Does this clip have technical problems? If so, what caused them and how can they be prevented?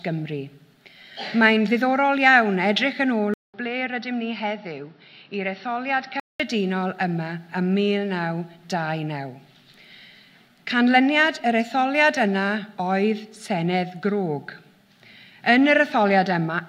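Yes. From 3.34 to 6.40 s the sound turns dull, losing everything above 5.8 kHz, drops about 5 dB, and gains a new noise floor after a 200 ms gap. This is likely an input switched to a poorer device; the separate noise floor and the silent gap set it apart from a codec merely narrowing the bandwidth. Fixing the input device in the recording settings and disabling automatic switching prevents it.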